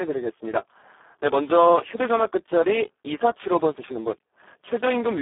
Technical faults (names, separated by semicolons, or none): Speex codec